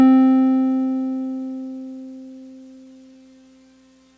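Between 2.26 and 3.45 s, packets reached the receiver late or more slowly than the music was being played out, so the jitter buffer kept running dry, producing repeated stalls (stutter). More than a dozen times the receiver stretched the last sound to bridge each hole, none longer than about 15 ms, adding about 0.15 s in all while dropping nothing. The music drags and stutters through that stretch, its band ending at 8 kHz as fits a G.722 call path.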